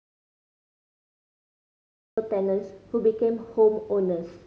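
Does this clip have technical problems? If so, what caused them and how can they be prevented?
Yes. The speech clip opens inside an audio dropout to silence that is already under way at 0.0 s and lasts until 2.18 s, where the speech cuts in mid-flow. The gap is silent with no room tone at all, so whatever was spoken in that stretch is lost. The likely cause is that the input signal was interrupted, by a disconnected device, a failed link or an accidental mute, while the recorder kept writing zeros. To prevent it, secure connections, check mute states and watch input meters before and during recording.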